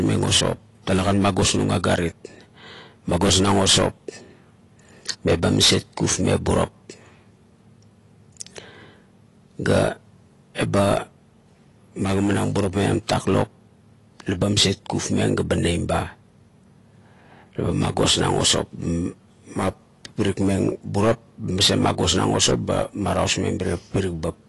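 Throughout, nothing is heard above 11.5 kHz and sibilants warble and fizz, unlike a clean low-pass; likely AAC compression, fitting a bitrate near 32 kbps.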